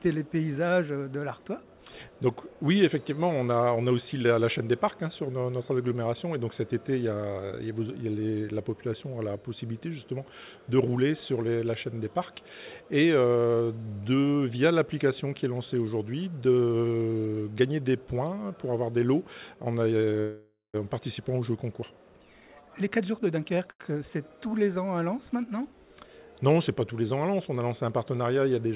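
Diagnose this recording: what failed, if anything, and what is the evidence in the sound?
At 20.2 s the sound stops and a fading buzz fills the gap for about 0.54 s, ending in 0.12 s of silence before resuming at 20.76 s. This is likely a call audio freeze in the network and jitter buffer stage, with delayed packets draining the buffer.

From 22.25 s to 23.69 s the audio runs hurried at unchanged pitch, about 124% speed. This is jitter buffer speed-up: the receiver trimmed pitch-period-length slices repeatedly, cutting roughly 0.3 s of accumulated delay.

Right after, from 23.71 s to 23.93 s, one sound is held too long with a faint buzz. This is a short stall from a late packet: the buffer ran dry and the last sound was stretched by about 86 ms until the packet arrived. The call path's band limit, with nothing above 4 kHz, is also audible and points to G.711 at 64 kbps.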